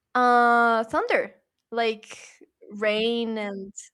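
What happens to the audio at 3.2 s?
Nothing goes wrong at 3.2 s; the speech carries on intact through that moment.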